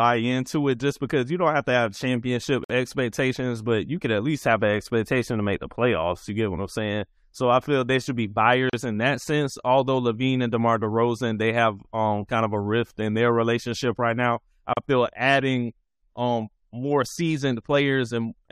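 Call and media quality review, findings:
Gap at a join of encoded pieces in speech: silent dropouts at 2.64–2.70 s (52 ms, after "have to have championship"), 8.70–8.73 s (37 ms, after "feel they should be") and 14.73–14.77 s (37 ms, after "relationship right now I"), repeating every 6 s. Component: segment concatenation. Mechanism: separately encoded pieces joined without trimming, so encoder start delay and last-frame padding remain. Edges are codec-smeared, and the sound resumes where it stopped.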